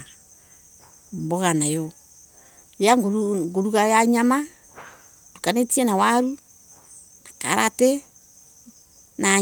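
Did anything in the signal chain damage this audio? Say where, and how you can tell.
No, nothing in this speech recording stood out on listening as a sign of damage from any stage of the signal chain.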